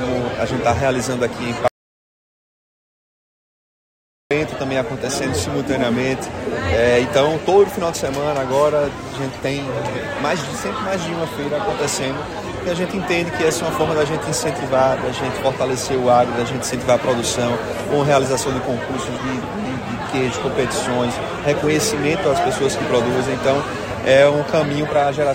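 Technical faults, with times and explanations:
1.68–4.31 s, audio dropout to silence: 2.63 s of silence, no room tone, likely from a lost input; waveform flatlines, spectrogram goes completely blank.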